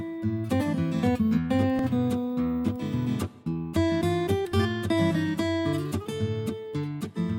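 A dropped buffer (overrun) at 1.79 s gives a jump where the sound skips straight ahead with no gap. The likely cause is samples overwritten by the hardware before the program read them, so a few tens of milliseconds simply vanish and the edges butt together.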